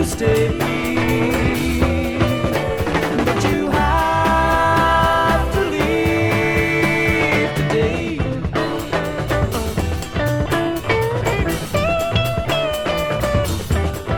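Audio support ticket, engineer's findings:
No fault found in the audio for this ticket.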